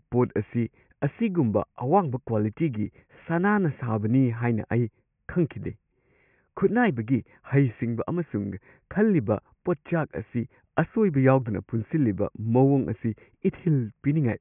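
No technical faults can be heard anywhere in the speech.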